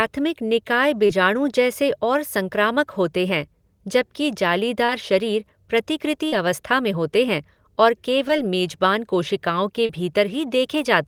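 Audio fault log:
1.06–1.10, 4.85–4.89 (after "संक्रामक होते हैं जबकि"), 6.28–6.33, 8.28 and 9.86–9.90 s, short concealed packet loss: 10 to 40 ms of audio arrived too late each time, so the decoder stretched the last sound across the gap and blended back, leaving brief smears or wobbles.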